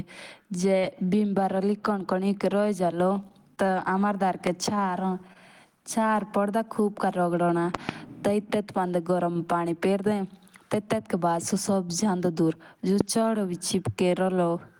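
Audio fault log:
0.79–0.83 s, short concealed packet loss: About 20 ms of audio never reached the decoder in time, so the receiver extended the last sound and blended back, leaving a brief smear.
1.05–1.21 s, short stall from a late packet: A packet arrived about 22 ms late and the jitter buffer ran dry. The last sound was stretched until it came, so nothing is lost but a sound lingers.
3.29–3.70 s, repeated packet loss (robotic sound): Three gaps in quick succession, the longest about 21 ms and about 40 ms in total, were each patched from the preceding sound, giving a choppy stretch with fragments missing.
4.47–4.49 s, loud pop: A single sharp pop about 15 dB above the sound, likely from a voltage spike such as static or a driver glitch, sits on top while the audio continues underneath.
5.33–5.37 s, short stall from a late packet: A packet arrived about 21 ms late, the buffer emptied, and the last sound was held over the gap, causing a slight drawn-out dip with nothing lost.
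7.75–7.91 s, loud pop: Two pops in quick succession, about 15 dB above the sound, likely from a plug or switch transient shaped by the downstream circuitry. They are heard as a double snap.
13.01–13.03 s, loud pop: One abrupt pop about 20 dB above the sound, likely from a sudden voltage step, stands out sharply over the continuing audio.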